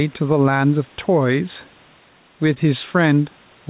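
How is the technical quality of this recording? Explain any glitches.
The recording is narrowband, with nothing above 4 kHz, which fits a G.711 telephone codec at 64 kbps. Two faults stand out.

Gain pumping runs through the whole clip. The gain swings by roughly 5 dB. The likely cause is input gain set too high, with a fast limiter or compressor pulling it back on every peak. This narrows the gap between loud and quiet passages and gives the speech a squeezed, breathing character.

A short concealed packet loss occurs between 2.54 and 2.58 s. About 20 ms of audio never arrived in time, and the receiver covered the gap by extending the preceding sound, then crossfading back into the real signal. Here it is heard as a brief smear or wobble in the speech. A short consonant at that point may be softened or lost.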